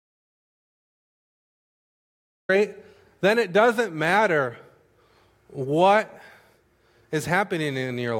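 An audio dropout to silence runs from the very start of the clip to about 2.49 s. The silence is already under way when playback begins, and the speech then comes in mid-flow. The gap is silent, with no room tone or background hiss beneath it. The input was likely lost for those first seconds, perhaps through a disconnected device, a failed link or a mute, while recording carried on writing silence.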